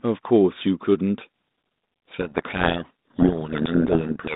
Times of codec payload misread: 1.20-4.36

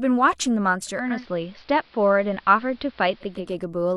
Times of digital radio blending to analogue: 0.86-3.60

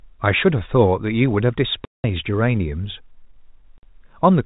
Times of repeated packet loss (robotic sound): none

